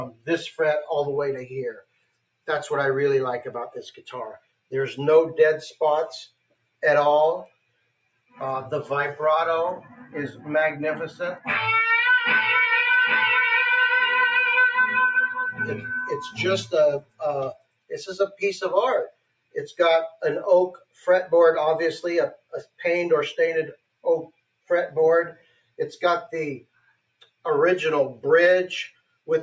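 A noise suppressor built for speech stays active across the whole clip and treats steady, sustained sound as noise. Level swings by a few decibels as attacks pass and held sound sinks, giving a pumping, fluttering quality. A plain compressor would track loudness, but this tracks steadiness.

From 0.12 to 10.06 s, the noise suppressor cuts sound it took for noise, about three seconds in total, with the deepest drops about 21 dB. The same happens from 15.27 to 29.27 s, about five seconds, dipping as deep as about 22 dB. Decays are chopped short and sustained passages sink, while sudden onsets survive. Dropouts would silence everything, but here only the steady parts sink. The band stops near 8 kHz, consistent with call microphone processing.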